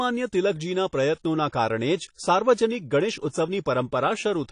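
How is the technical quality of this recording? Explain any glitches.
The recording is noticeably degraded by compression throughout. The speech sounds dull and smeared, with nothing above 9.8 kHz and a fizzy, warbling edge on sibilants. The likely cause is low-bitrate AAC compression, which fits AAC-LC at around 32 kbps. The encoder lowers its cut-off and coarsely quantises each frame's spectrum, leaving gaps and smearing detail.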